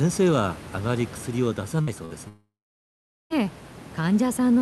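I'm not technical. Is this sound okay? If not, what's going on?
No. Twice the call briefly lost a few pieces of audio, a burst of packet loss, at 1.81 to 1.90 s and 2.05 to 2.13 s, so the speech turns to a short fading buzz or hiss and skips ahead.

From 2.28 to 3.33 s the sound fades into a buzz or hiss, then goes silent for most of that second before the speech returns with a chunk missing. The likely cause is a long network dropout.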